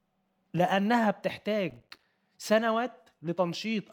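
From 1.70 to 2.03 s, processor overload crackle tears through the speech. The processor kept missing deadlines for buffers of roughly 5 ms, leaving around twenty hard-edged silent gaps. Unlike a single clean dropout, it's a rapid gritty crackle that stops when the load passes.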